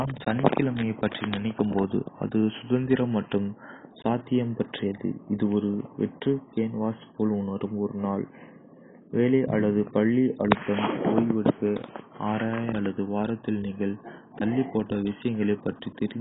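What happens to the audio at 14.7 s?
At 14.7 s the speech is as dull and smeared as everywhere else, because the damage runs through the whole clip: nothing survives above 3.8 kHz, and what remains has a warbling, fizzy texture. This is heavy AAC compression, likely at a very low bitrate around 16 kbps, where quantising each frame's spectrum against a hearing model strips the top band and leaves holes. The warble and fizz distinguish it from a simple low-pass filter, which would only dull the sound.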